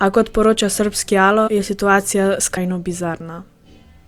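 Whole compressed frames were dropped, by loss from the file or rejection as damaged, so this speech clip skips ahead twice. At 1.47 to 1.49 s roughly a tenth of a second vanishes, which fits about five frames of 23.2 ms; at 2.56 s about a fifth of a second goes, closer to ten frames.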